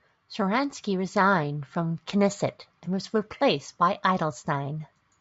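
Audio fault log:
No faults are heard in the speech. Nothing calls for a log entry.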